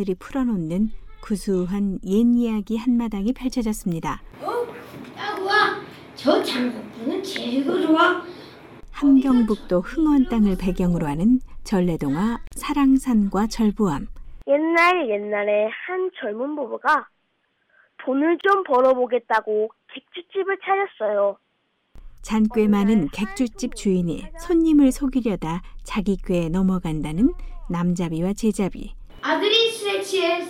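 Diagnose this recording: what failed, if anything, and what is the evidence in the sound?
Two brief dropouts cut into otherwise continuous sound: a silence of about 43 ms from 12.47 to 12.52 s and another of about 28 ms from 18.41 to 18.44 s. Each has smeared edges, and the sound resumes exactly where it stopped. This is a gap at a join of encoded pieces, a codec-stage fault. Separately encoded segments were spliced without trimming, so each encoder's start-up delay and final-frame padding remain as silence.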